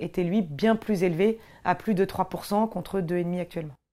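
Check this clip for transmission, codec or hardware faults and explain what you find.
Nothing in this speech recording points to a fault. There is no event anywhere in it that needs explaining.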